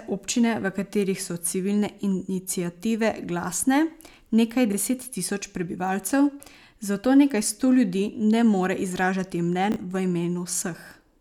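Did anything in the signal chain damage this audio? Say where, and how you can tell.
Yes, there are chunks out of order at 4.70–4.74 s, just before "deset tisoč prebivalcev", and at 9.72–9.76 s, just after "more izražati". Each is a 40 ms stutter where two 20 ms pieces are swapped, one arriving a single chunk late, which points to a jitter buffer or network reordering stage. Unlike packet loss, no audio is missing or concealed. The speech is jumbled, with three hard joins.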